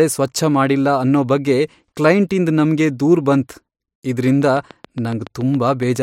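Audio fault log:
4.28–5.97 s: train of clicks. A regular ticking runs through the end of the speech at about 7.1 clicks per second, some fifteen pulses in all, each with much the same sharp shape and peaking roughly 5 dB above the speech, and they carry on through any pauses. The steady pace and repeated pulse shape point to a likely cause in electrical interference from nearby equipment or a faulty connection or power supply.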